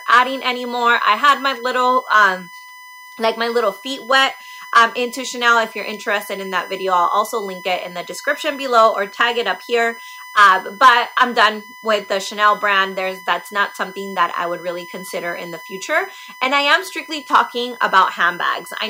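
From start to finish the clip carries USB whine, a fixed-pitch tone built on 1 kHz with its strongest component at 2 kHz, sitting roughly 20 dB below the wanted sound. A USB bus drawing current in 1 ms frames has leaked through power or ground into the audio path. On a spectrogram it shows as thin, unbroken horizontal lines at 1 kHz and 2 kHz across the whole duration. In the waveform it appears as a fine periodic ripple riding under quiet passages.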